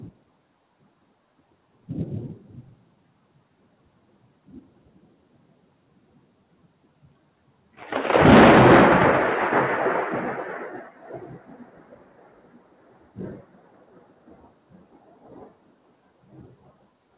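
A noise suppressor built for speech stayed active on this everyday sound for the whole clip. It treats steady tones, room ambience and reverberant tails as noise and pulls them down, so sharp onsets come through while anything sustained sinks by something like 20 dB. The result pumps and flutters, with decays cut short and the background thinning out between events, all within a call-path band that stops at about 4 kHz.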